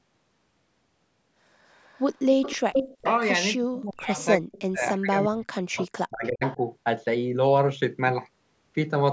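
From 1.71 to 3.12 s there's an echo leak: a delayed copy of the speech trails the original by about 305 ms, sitting roughly 10 dB down. It most likely comes from a far-end speakerphone whose echo canceller let part of the loudspeaker pickup slip back into the call. Near the end of that stretch, from 2.93 to 3.05 s, the main speech briefly dips by around 25 dB for about a tenth of a second. That is speech suppressed in double talk, likely the canceller clamping down because both sides were active at once.

The bigger hit runs from 3.58 to 6.59 s. The speech keeps getting pushed down in pieces, about two seconds of it in total, with the deepest drops near 40 dB, so chunks nearly vanish. That's probably the same double-talk suppression again. Inside that stretch the echo leak comes back twice with a 359 ms delay. From 4.19 to 4.61 s it's faint, roughly 20 dB under the speech, and from 6.24 to 6.56 s it's stronger, about 10 dB under, most likely the same leaky canceller at work.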